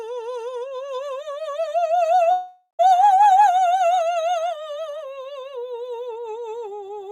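A long network dropout runs from 2.31 to 2.81 s. The music smears into a fading buzz, drops to about 0.1 s of silence, then resumes with roughly half a second missing, likely because a run of audio packets never arrived.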